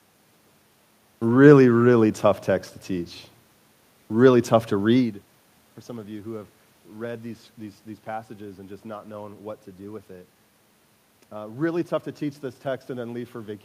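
No technical faults can be heard anywhere in this speech recording.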